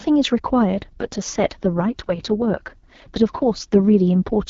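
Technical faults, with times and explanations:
0.76 to 4.36 s, AMR rate drop: the speech stays just as wide-band and never breaks up, but it suddenly goes rough, raspy and more synthetic and stays that way until near the end. That sound fits the AMR-WB HD Voice codec being pushed from its clear 12.65 kbit/s mode down to its 6.6 kbit/s mode, the kind of switch a network makes on a weak radio link to spend more bits on error protection.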